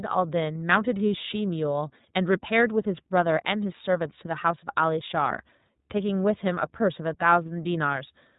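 From start to finish the speech has passed through the iLBC codec, whose coarse, frame-by-frame coding fits its 13.33 kbps, 30 ms mode. Nothing above 3.8 kHz survives, so the speech sounds muffled and narrow, with a plainly audible rough, synthetic edge.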